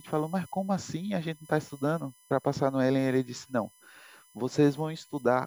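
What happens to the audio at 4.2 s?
At 4.2 s there is USB whine, present throughout the clip. It is a fixed-pitch tone on a 1 kHz fundamental, strongest at its 11 kHz harmonic, around 30 dB below the speech. The bus's 1 ms frames leak current into the audio path.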